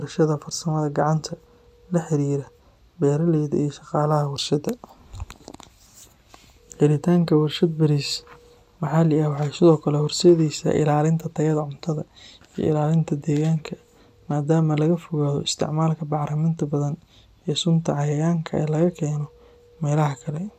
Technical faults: DAB burbling

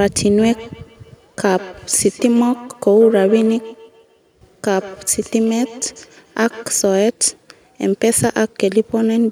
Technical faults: feedback echo between two devices

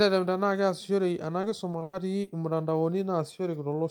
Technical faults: repeated packet loss (robotic sound)

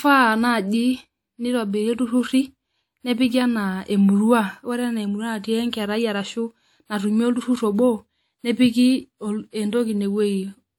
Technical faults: pre-echo

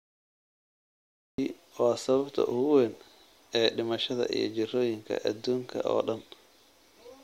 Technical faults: cut-off start

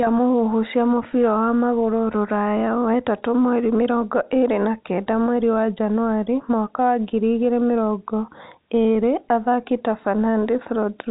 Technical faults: none

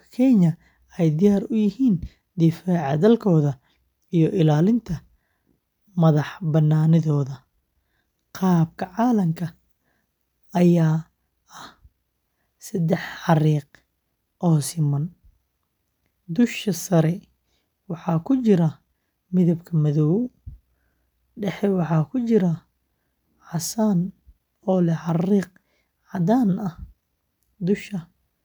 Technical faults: none

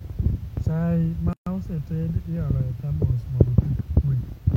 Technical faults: gap at a join of encoded pieces

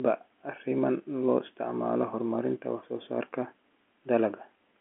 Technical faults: none

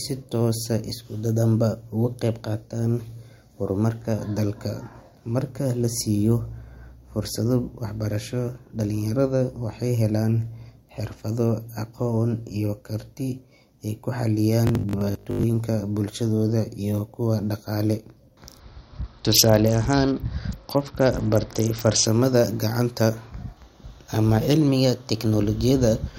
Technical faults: robotic sound from repeated short buffers; Bluetooth SBC bit pool drop

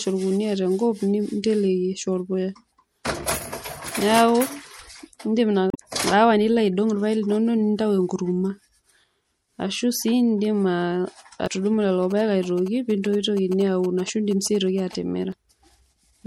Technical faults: MP3 compression; damaged data in a compressed stream; GSM signalling bursts

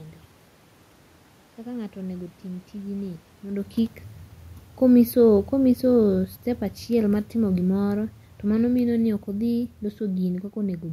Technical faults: automatic gain falling

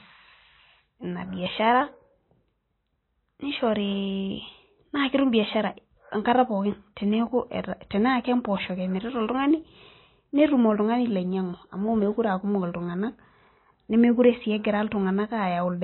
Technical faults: MP3 compression

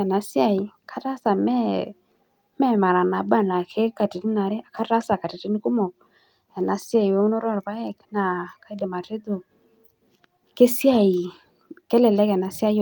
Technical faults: none

